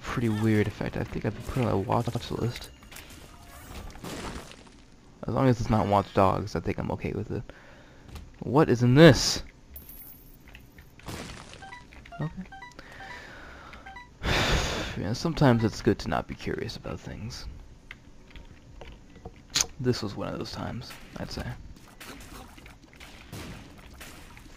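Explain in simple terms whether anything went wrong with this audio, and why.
Two spots stutter, and both are repeated frames. At about 2.07 s, a tiny slice of about 78 ms plays three times in a row, and at about 21.63 s a shorter slice of about 52 ms does the same. The chunk sizes fit a few compressed frames being written three times over, so the player just replays them. That repeat is the stutter you hear, and it stretches the audio by roughly 0.16 s and 0.1 s.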